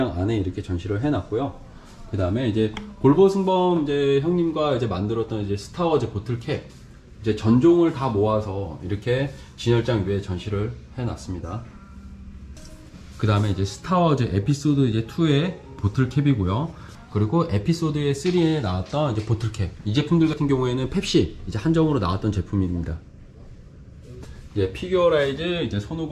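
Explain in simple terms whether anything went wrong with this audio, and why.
Nothing went wrong here: the recording holds together as one steady, unbroken signal, with no dropouts, distortion or glitches to be heard anywhere in it.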